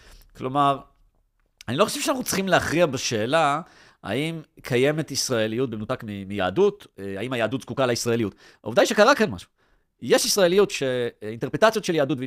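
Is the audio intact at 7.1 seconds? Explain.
No, 7.1 s falls inside a time-stretched section from 5.43 s to the end, sped up about 1.45x, likely by software squeezing the audio while preserving pitch, so the speech sounds rushed.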